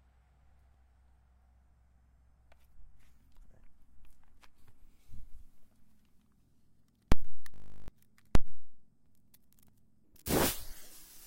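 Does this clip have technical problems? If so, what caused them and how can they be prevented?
Yes. From 7.54 to 7.88 s the sound turns into a steady, hard buzz at 50 Hz: a single 20 ms slice repeats exactly 17 times. This is a system hang loop. The computer or audio driver stalled while the sound hardware kept replaying the same small ring buffer. Roughly 0.3 s of real audio is lost beneath the buzz. Preventing it means giving the audio thread real-time priority and enough buffer headroom so that the driver never starves.

From 10.04 s to the end, the audio suddenly becomes quicker and brighter, running 1.44 times too fast and sitting about seven semitones higher, because speed and pitch rise together. This is a section at the wrong speed, likely caused by that stretch being resampled or played against the wrong clock rate, such as mismatched sample-rate settings. Preventing it means keeping the sample rate consistent across every file, editor and playback device in the chain.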